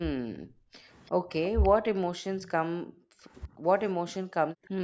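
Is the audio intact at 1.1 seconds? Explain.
No. Echo leak, 1.06 to 1.1 s: a very faint copy of the speech about 342 ms late, likely loudspeaker pickup the echo canceller failed to remove. Speech suppressed in double talk follows at 1.12 to 1.33 s: the speech dips by roughly 25 dB for about 0.2 s, likely because the canceller muted both talkers at once.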